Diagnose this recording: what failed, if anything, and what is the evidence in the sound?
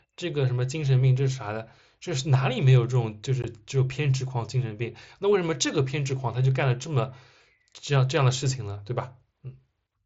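The Bluetooth link between headset and phone dropped out at 3.42 s. That's unconcealed Bluetooth headset packet loss: a hole of about 15 ms, which fits two lost voice packets, left as a gap with hard edges instead of being patched over, so you hear a brief break in the speech.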